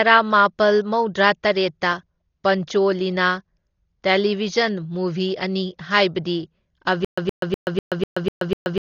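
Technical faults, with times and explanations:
Throughout: Dolby Digital compression, likely at a low bitrate around 32 kbps; heavy damage, nothing above 6.9 kHz, dull sound with rough fluttering noise filling starved frequency lines.
7.05 to 8.84 s: stutter with silent gaps, likely a stalled stream replaying a 119 ms fragment every 248 ms, seven times, with 129 ms silences, lasting to the end.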